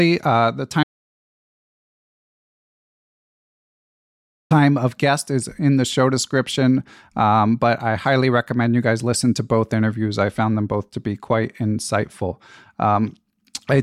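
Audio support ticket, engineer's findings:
Audio dropout to silence, 0.83 to 4.51 s. Sound cuts mid-flow to silence, no room tone, about 3.7 s lost. Returns at "of guest is in". Likely input loss while recording continued.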